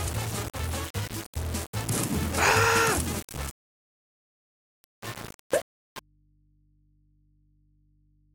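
The whole clip sounds coarse and grainy, with distortion that rises and falls with the sound and quiet passages turning gritty. This is low bit depth without dither, and the heavy error, only about 15 dB under the signal, fits rounding to about 5 bits. A waveform would show visible staircase steps, and a spectrogram would show broadband distortion that follows the signal's shape rather than a steady noise floor. At 6.0 s the sound cuts out abruptly and never returns. The rest is an audio dropout to a faint residue: only mains hum remains, roughly 40 dB below the earlier level, likely from an input left open after the signal was lost. The waveform collapses to a thin, regular trace, and the spectrogram shows only narrow hum lines at low frequency.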